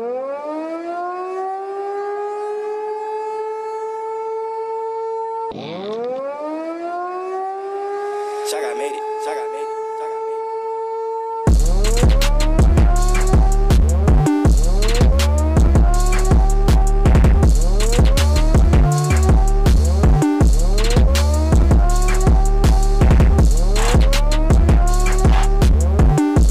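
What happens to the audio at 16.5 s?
Nothing goes wrong at 16.5 s; the audio carries on intact through that moment.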